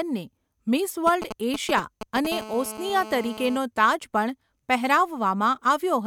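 From 1.07 to 2.27 s, GSM signalling bursts break in over the speech: a galloping dit-dit-dit of short 217 Hz buzzes, fairly loud, only a few decibels under the speech. A nearby 2G phone exchanging signalling is sending brief groups of radio pulses, and the audio circuitry rectifies them. On a spectrogram they show as clustered vertical stripes; the waveform shows spiky packets.

At 2.32 s a steady GSM phone buzz takes over and runs to 3.57 s. It is a hard, raspy tone at 217 Hz, about 14 dB below the speech. The phone is now in a call and transmitting continuously at that burst rate. A spectrogram shows a dense ladder of horizontal harmonics at 217 Hz spacing, and the waveform carries a regular pulse train.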